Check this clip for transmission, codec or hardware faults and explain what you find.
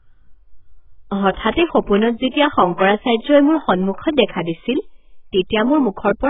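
Two codec faults are audible. Throughout, the speech is dull and smeared, with nothing above 3.8 kHz; heavy AAC compression is likely, consistent with a bitrate around 8 kbps. Sparse quantisation removes the highs and leaves a warbling, fizzy texture on sibilants.

Pre-echo appears at 1.34 to 1.37 s and 1.51 to 1.54 s, about 32 and 35 ms long. Block-wide quantisation noise spreads ahead of sharp attacks, leaving a brief hiss and softened onsets.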